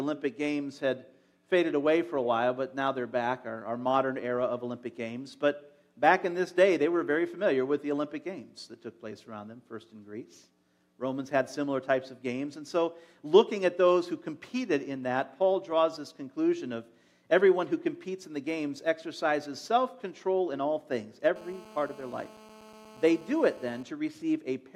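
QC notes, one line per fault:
21.36–23.83 s: GSM phone buzz. A hard, raspy buzz at 217 Hz with a dense stack of harmonics sits about 22 dB below the sound. A nearby 2G handset in a call transmits in bursts at that rate, and the audio circuitry rectifies the radio pulses, giving a steady buzz unrelated to the signal. Mains hum differs: it sits at 50 or 60 Hz, sounds smoother, and would not appear only near the end.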